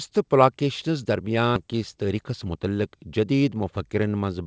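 A skip ahead occurs at 1.56 to 1.58 s. A stretch of speech, around 0.4 s, was dropped while later audio was already queued. Playback jumps forward with no filler, and the two sides of the missing piece butt together almost directly.

A jitter buffer speed-up follows from 2.13 to 2.60 s. The buffer was holding more delay than its target, so it trimmed short pitch-period pieces, some 40 ms in all. The speech runs at about 108% speed with unchanged pitch and sounds hurried. Throughout, the call path's band limit leaves nothing above 8 kHz, which fits G.722 at 64 kbps.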